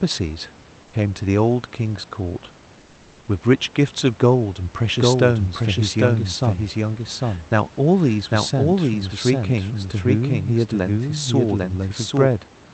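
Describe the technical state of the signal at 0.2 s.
At 0.2 s the speech signal is intact, with only the call codec's normal coding and the faint room noise sitting about 28 dB below the voice.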